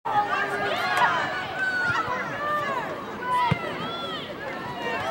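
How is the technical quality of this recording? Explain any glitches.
No glitches or technical faults are audible in the recording.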